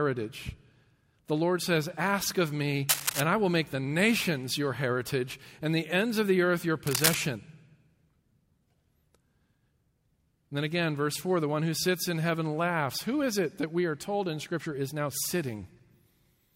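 Speech with two brief bursts of scratchy, rustling noise, from 2.88 to 3.21 s and from 6.86 to 7.15 s, each roughly as loud as the voice. This cable scratch noise likely comes from a worn cable or connector being moved, its contact resistance fluctuating rapidly.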